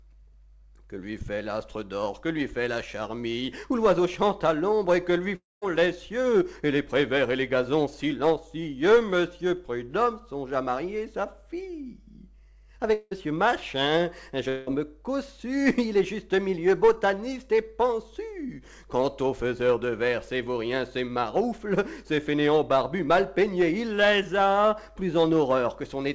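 At 5.36 to 5.64 s, 12.94 to 13.13 s and 14.49 to 14.69 s the sound breaks into a fading buzz. The first also drops to silence. That's likely a long network dropout, with the lost audio concealed and never recovered, over a call codec that cuts everything above 8 kHz.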